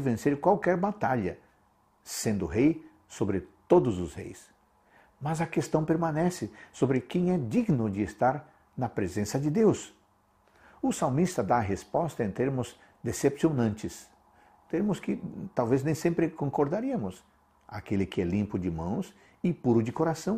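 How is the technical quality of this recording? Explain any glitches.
No glitches can be heard anywhere in the recording, and the signal stays technically sound throughout.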